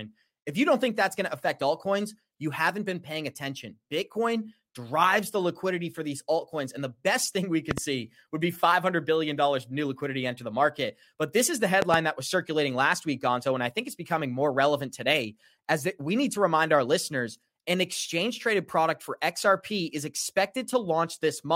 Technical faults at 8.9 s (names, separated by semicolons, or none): none